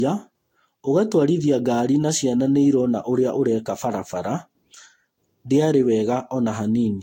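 Speech throughout that sounds swirly, hollow and smeared, with soft, blurred consonant attacks and nothing above about 16.6 kHz. This is generation loss, likely from around five rounds of lossy re-encoding, which fits Vorbis near 60 kbit/s, each pass adding fresh quantisation damage.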